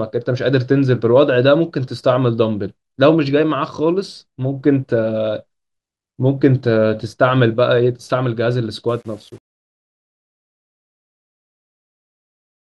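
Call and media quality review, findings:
Truncation distortion on a fade, 8.89–12.71 s, worst from 9.25 s to the end. The fade-out starting around 9 s turns gritty at its tail. Probable component: an undithered fade or gain stage whose steps fit an 8-bit word. At the quietest levels the waveform collapses into a few coarse steps.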